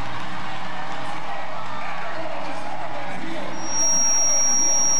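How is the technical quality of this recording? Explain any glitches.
A DC offset runs through the whole recording, and it is not audible as a sound. The waveform sits shifted off zero by a constant of about -19 dBFS, appearing as steady energy at 0 Hz and eating into headroom, so peaks clip sooner on one side.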